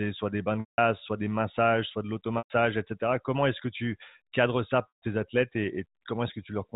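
A speech clip, heard through a telephone band that stops at 4 kHz, has three short gaps where the sound briefly holds a buzzy, frozen pitch and then fades away: at 0.60 to 0.78 s after "soit des bains de", at 2.38 to 2.50 s after "des massages soit de", and at 4.88 to 5.02 s after "que tu cadres ça". These are packet loss with pitch repetition. The receiver bridged each missing stretch (180, 120 and 140 ms) by repeating the last pitch period and fading it out, which fits runs of lost 20 ms packets.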